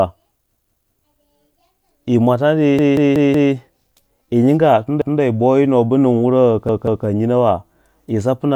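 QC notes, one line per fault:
0.56–0.93 s: repeated buffer. A chunk of about 186 ms plays twice more with hard joins, heard as a stutter; the length fits an 8192-sample buffer.
2.79–3.53 s: repeated buffer. The same 186 ms piece replays four extra times because new audio arrived late, giving a long stutter with a hard edge at each join.
5.02–5.20 s: repeated buffer. One extra play of a 186 ms chunk, heard as a single short stutter with a hard join and essentially no audio lost.
6.69–7.06 s: repeated buffer. The last 186 ms buffer replays twice while the device waits for data, producing a stutter with abrupt joins at each repeat.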